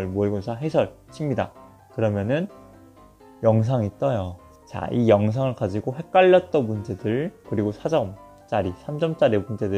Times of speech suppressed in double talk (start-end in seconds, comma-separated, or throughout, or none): none